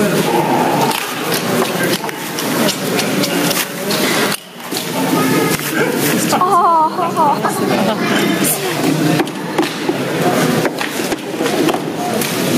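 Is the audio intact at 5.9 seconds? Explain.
No. At 5.9 seconds the audio shows gain pumping, which runs through the whole clip rather than appearing only at that moment. The level swings by around 20 dB. This likely comes from input gain set far too high, so a fast limiter or compressor clamps down on each peak and releases between them, leaving the dynamics squashed and breathing.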